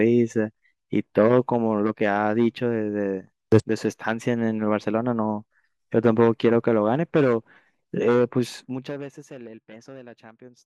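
From 8.57 to 9.09 s the speech drops by roughly 20 dB, and a fine zipper noise rides on it: a rapid ticking, around two hundred small clicks a second. The gain is being moved in discrete jumps with no smoothing, and each jump puts a tiny discontinuity in the waveform. This fade carries a buzzy texture that stops the moment the level settles.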